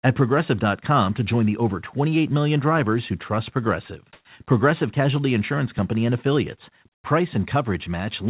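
From 4.13 to 4.25 s, about 120 ms of the background is replaced by comfort noise. The real room sound, about 56 dB below the loud passages, gives way to a smoother synthetic hiss, and the level shifts by about 19 dB before the original background returns. The likely cause is discontinuous transmission: the sender stopped sending when it detected no speech, and the receiver filled the gap with generated noise. Across the clip, nothing is heard above 4 kHz, which fits a narrowband call codec such as G.711.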